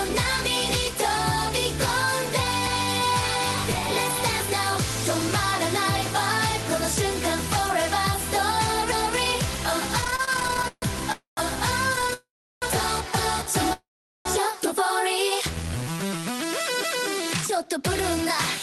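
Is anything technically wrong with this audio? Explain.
Yes. From 10.01 to 10.84 s and 11.93 to 12.13 s, repeated stalls (stutter) make the sound drag and judder, because late packets keep starving the jitter buffer and the last sound is stretched over the gaps.

Call audio freezes at 11.12–11.39 s, 12.13–12.64 s and 13.73–14.27 s each hold the sound as a fading buzz into silence, then resume unchanged, likely from packets held up en route emptying the buffer.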